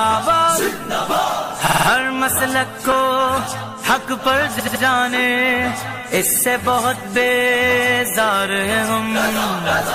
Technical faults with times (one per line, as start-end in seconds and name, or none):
1.66-1.87 repeated frames
4.59-4.82 repeated frames